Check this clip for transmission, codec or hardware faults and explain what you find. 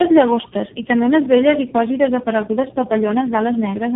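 The clip shows one fault, tandem speech coding, present for its whole length. The call passed through four separate speech codecs in a row, with G.711 links between them, and each border decoded the speech and coded it again. Every coder worked on the previous one's errors and added its own. The speech sounds rough, muffled and warbly throughout, with nothing above 3.8 kHz, which fits a narrowband chain ending in a low-rate coder such as AMR-NB at 5.9 kbit/s.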